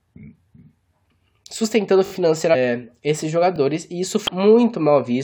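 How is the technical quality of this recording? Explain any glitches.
The speech has four short glitches, two of each kind.

Repeated buffer at 2.06 to 2.12 s and again at 3.56 to 3.58 s: fresh audio didn't arrive in time, so the playback side looped a 20 ms chunk, three extra times at first, once later. You hear a quick stutter with hard joins, and basically nothing gets skipped.

Damaged data in a compressed stream at 2.53 to 2.56 s and at 4.27 s: corrupted bytes threw the decoder off, so it misread frames and hunted for the next valid header. Each one comes out as a brief blip, maybe with a jump forward.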